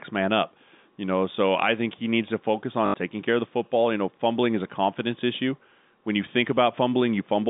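At 2.86 s, right after "he needs to focus" and before "taking care of the", there is packet loss with the last packet repeated, lasting about 80 ms until 2.94 s. Instead of a silent gap, the receiver replays the last chunk of audio it got. The loops seldom line up with the pitch, and the run buzzes like a brief robotic stutter. The length fits four lost 20 ms packets, and the buzz would sit near 50 Hz. The narrow telephone band of the G.711 line carries through the fault unchanged.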